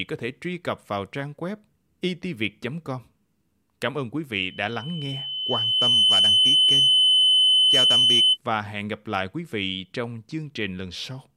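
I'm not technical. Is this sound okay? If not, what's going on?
No. From 4.43 to 8.38 s, just after "ơn quý", there's loudspeaker feedback squeal: the microphone picked up its own loudspeaker and kept re-amplifying one pitch. A 3 kHz whistle swells over about a second and a half, louder than the speech, until "và hẹn gặp lại".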